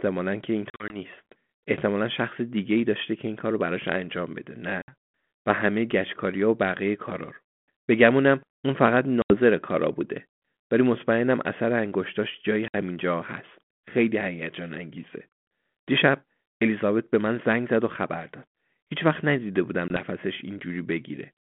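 Speech with packet loss on an ADPCM call at 0.70 s (gaps scattered over 200 ms), 4.82, 9.22, 12.68 and 19.88 s: hard silent holes totalling 20 to 100 ms per event, each followed by briefly, slightly distorted speech as the decoder's predictor resynchronises. Ordinary dropouts do not have that recovery.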